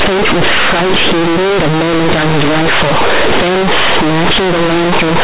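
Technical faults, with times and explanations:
Throughout, companded audio read as linear: the mu-law telephone bytes are played back as plain 8-bit samples with no expansion. Every sign flip then jumps across half the output range, so quiet speech comes out as large as loud speech. That's the harsh, buzzy distortion, with heavy noise filling the pauses.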